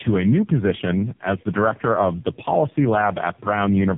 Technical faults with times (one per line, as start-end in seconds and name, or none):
0.00-3.97 tandem speech coding